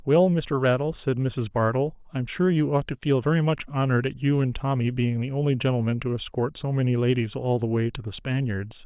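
No technical faults occur at any point in the speech, so there is nothing to describe in time order.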